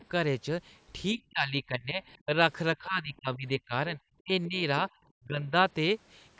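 A speech recording made through call microphone processing, with content ending near 8 kHz, whose talker is repeatedly pushed down by speech suppressed in double talk at 1.14–2.03, 2.25–2.39, 2.76–4.0, 4.21–4.31, 4.48–4.62 and 5.15–5.54 s. The dips run from about 10 dB to about 40 dB, and the clip likely has an echo canceller ducking the near voice while the far side talks. On a waveform these are sudden envelope collapses mid-phrase, and on a spectrogram they show as faded vertical bands. Between 4.44 and 4.48 s there is a brief scrap of the other side's voice leaking through, about 25 dB below the talker, likely as uncancelled loudspeaker echo. It appears as a faint, short smear of separate harmonic energy just before the next dip.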